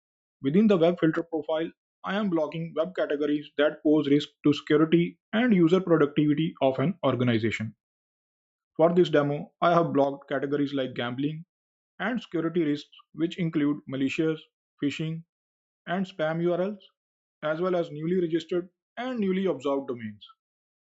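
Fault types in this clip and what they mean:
one channel drops out: The level falls abruptly by about 6 dB from 1.19 s to 3.59 s, recovers, then drops again from 10.04 s to the end. A clean, flat 6 dB step is what a mono sum produces when one stereo channel goes silent and both channels carry the same sound, so the likely cause is loss of one channel. Anything carried only in that channel vanishes during these spans.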